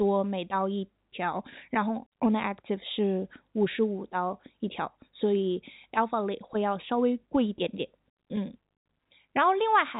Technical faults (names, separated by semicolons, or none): none